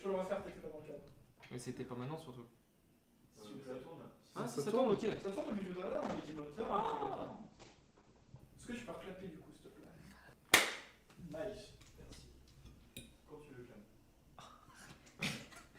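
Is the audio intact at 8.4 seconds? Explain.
No. At 8.4 seconds the sound is muffled and rough, with a watery texture and no top end. This is a call bitrate drop from 4.89 to 8.45 s. The encoder was squeezed from roughly 64 to about 10 kbps, coding coarsely and cutting everything above 8 kHz.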